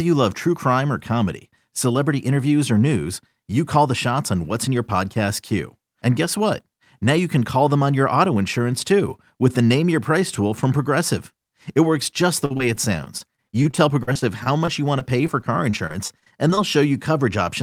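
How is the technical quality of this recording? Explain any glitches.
The recording has one clear problem near the end. From 12.45 to 16.59 s there is repeated packet loss, giving a robotic sound. 27 short holes appear across those four seconds. None lasts more than 49 ms. Each hole is filled by stretching the sound just before it. In total about 535 ms is patched this way and about 420 ms is lost, so roughly 13% of that span is concealment. The speech turns choppy, with fragments missing.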